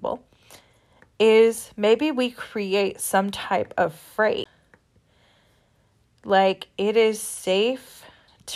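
At 4.44 s, after "create some type of", there is a CD skip. The laser jumped tracks. A tick and brief mute follow, then the speech jumps.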